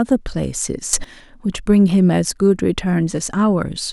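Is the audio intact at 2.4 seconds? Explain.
Yes, the speech at 2.4 s is intact, with no fault heard at that moment.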